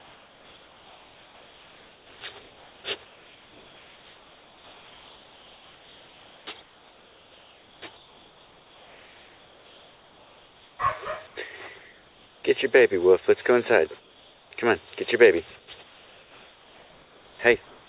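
Comfort noise in place of the background fills the pauses at 0 to 10.79 s, 11.27 to 11.36 s, 11.78 to 12.44 s, 14.0 to 14.51 s, 15.59 to 17.39 s and 17.66 s to the end. The sender likely stopped transmitting during these gaps, so the receiver substitutes steady, featureless synthetic hiss for the real background. That hiss is up to about 5 dB quieter, and like everything else here, it has nothing above 4 kHz.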